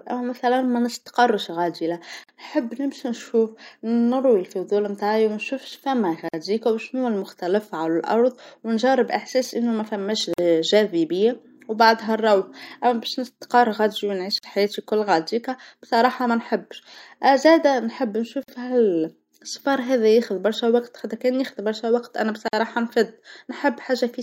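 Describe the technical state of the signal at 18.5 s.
A gap at a join of encoded pieces runs from 18.43 to 18.48 s. Untrimmed encoder padding leaves a 49 ms gap with smeared edges. Then the speech resumes.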